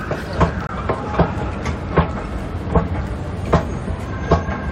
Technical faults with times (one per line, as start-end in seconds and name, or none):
0.67-0.70 corrupt frame muted